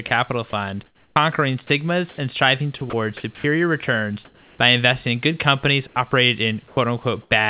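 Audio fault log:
0.08–3.44 s, sound chopped by the voice detector: the speech leading up to "returns by investing in" stutters, with quiet syllables and word edges clipped away, about 570 ms of it replaced in all. This is likely the sender's voice detector toggling transmission on and off, with the gaps filled by comfort noise, set against a call path that carries nothing above 4 kHz.
4.25–4.58 s, comfort noise in place of the background: just before "by investing in good", the pause loses its texture and becomes a steady, featureless hiss about 3 dB quieter than the real background, which sits about 33 dB below the loudest speech. For these 330 ms the sender likely stopped transmitting during silence, and the receiver synthesised noise roughly shaped like the room until speech resumed.
5.87–7.31 s, sound chopped by the voice detector: after "investing in good companies" the choppiness returns, with word onsets and soft tails dropping out and roughly 270 ms swapped for synthetic noise. 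The likely cause is once more the voice detector repeatedly switching transmission off, with comfort noise patched into each gap.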